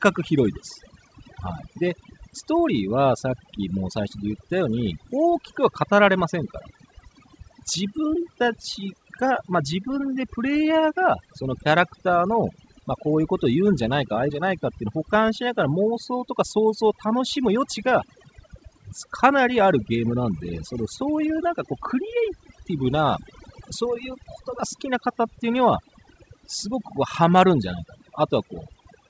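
Overdone noise removal runs through the whole speech clip. The noise reducer was set far too hard. Frequency bands near its noise estimate get pushed down or shut off, and the softer parts of the speech are pulled down with them. The background drops away and breaks up into twinkling specks. Over the G.722 call path, nothing reaches above 8 kHz.

At 14.30 s there is a skip ahead. Playback jumps forward with no gap filled in. Roughly 0.4 s of speech is simply gone. The audio on either side is butted together almost directly. This points to a stretch being dropped while later audio was already queued. The delay falls by about the same amount at that moment. The jump is abrupt, and the speech loses its continuity.

From 16.19 s to 18.70 s comes a jitter buffer speed-up. The buffer was holding more audio than it wanted. To shed that delay, the receiver cut out short pieces of one or a few pitch periods, again and again. 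In total, roughly 0.15 s is trimmed away. The speech plays about 7% faster here. The pitch stays the same, but the pace sounds pushed and slightly hurried.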